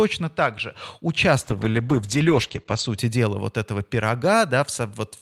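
From about 1.42 s to 3.03 s the speech hits a call bitrate drop: the connection's bandwidth estimate sagged and the encoder got squeezed onto far fewer bits, which sounds like a fall from around 48 kbps to roughly 11 kbps. For about 1.4 s the voice goes coarse, and the top end gets chopped at 8 kHz instead of reaching 20 kHz, so it sounds muffled. It clears up right before "дела вот этого".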